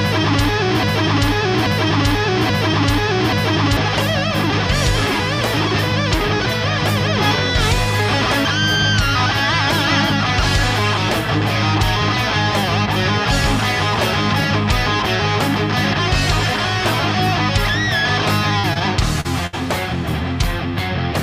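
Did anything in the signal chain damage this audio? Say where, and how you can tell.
Yes. Broken-record loop, 0.83 to 3.77 s: a 0.83 s fragment repeats exactly four times, likely a stalled player or stream resending its last buffer.

Short concealed packet loss at 18.59, 18.73 and 19.21 s: 40, 20 and 40 ms gaps in the network path, filled by decoder extrapolation, heard as brief smears.

Burst of packet loss, 19.47 to 19.55 s: about 60 ms lost in transit, continued and faded by the decoder before the sound resumes further on.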